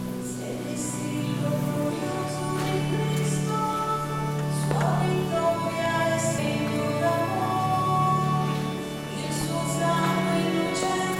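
At 6.38 s, damaged data in the compressed stream makes the decoder misread a frame and resynchronise, producing a brief glitch in the sound.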